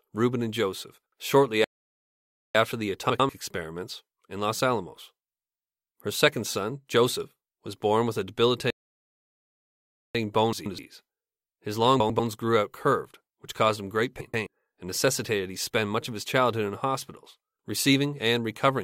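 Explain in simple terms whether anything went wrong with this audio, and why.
Twice the player likely ran out of data and stalled, a playback stall: the speech falls silent from 1.64 to 2.55 s and from 8.70 to 10.15 s, then resumes.

Frames out of order also appear, where neighbouring chunks of audio, about 96 or 128 ms each, were played swapped. This makes brief garbled flutters at 3.10, 10.53, 12.00 and 14.21 s.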